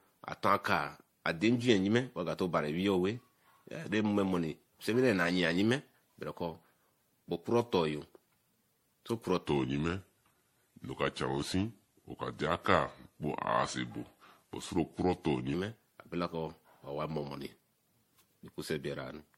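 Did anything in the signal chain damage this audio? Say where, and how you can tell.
Yes. At the codec stage there's generation loss throughout: the speech sounds swirly, hollow and smeared, with blunted attacks. That's more damage than one pass would do. It fits a 64 kbit/s MP3, likely re-encoded around seven times, each pass adding fresh quantisation noise.

At playback, or possibly during editing, there's a section at the wrong speed from 9.47 to 15.54 s. The speech drops to 0.824 times speed, about three semitones lower, sounding slow and deep, then snaps back. That's likely a clock mismatch that shifts speed and pitch together.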